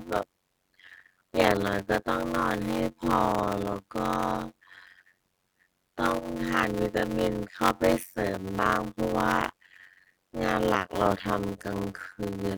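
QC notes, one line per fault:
Throughout, block size mismatch (padded): the speech carries a steady buzz at about 92 Hz and plays at roughly half speed (0.533x) while keeping close to its normal pitch. One stage hands over shorter blocks than the next one reads, and the shortfall in each block is filled with silence. The buzz is that gap repeating once per block, and the slowdown follows the ratio of the two sizes, which fits 256-sample blocks being read as larger ones.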